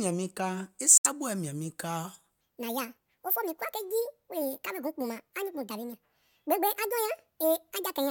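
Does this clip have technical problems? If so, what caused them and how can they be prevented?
Yes. The likely cause of the first fault is a Bluetooth dropout: packets bound for the headphones arrived too late and were discarded, so the output fell silent from 0.98 to 1.07 s, a gap of about 90 ms that fits roughly three lost packets. The sound cuts out and resumes on "mìȧŋ miŋ" as if it had kept playing underneath, so a short stretch is simply missing. Keeping the headphones close to the source with a clear line of sight, away from crowded 2.4 GHz traffic, prevents this.

From 2.41 s to the end, the section at the wrong speed was likely caused by an editor or player running that part against the wrong clock, at 1.69 times its recorded speed. Because speed and pitch are tied together here, the speech jumps suddenly into a hurried, chipmunk-like delivery raised by about ten semitones, and it stays that way to the end. 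Matching the sample rate and clock settings across every stage of the editing and playback chain prevents this.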